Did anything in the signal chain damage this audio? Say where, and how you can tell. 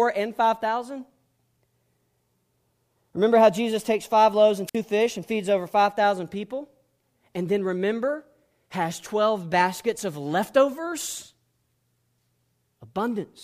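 Yes. There is a wireless microphone squelch dropout from 4.67 to 4.76 s, in the analogue stage at the radio link between the microphone's transmitter and its receiver. The FM signal fades, static briefly swells, and then the receiver's squelch gate cuts the output, leaving a hole of near silence lasting 54 ms before the speech returns. That short hiss-then-mute sequence points to lost RF carrier rather than a digital or network fault.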